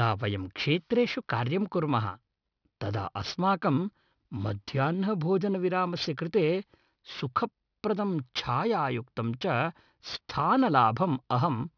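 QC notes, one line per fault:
Throughout, aliasing: the audio was taken down to a lower rate with no filter first, and the hard band edge near 5.5 kHz fits an 11 kHz rate. Energy above it folds back as false, unrelated tones roughly 20 dB under the speech, making sibilants gritty and metallic.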